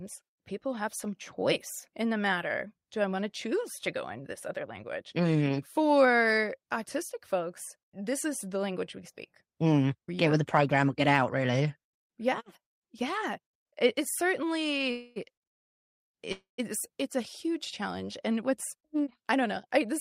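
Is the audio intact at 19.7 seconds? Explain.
No. From 18.48 to 19.89 s the speech runs about 6% fast yet keeps its pitch, sounding slightly hurried. This is jitter buffer speed-up: with too much audio queued, the receiver repeatedly cut pitch-period-sized slivers, dropping roughly a tenth of a second overall.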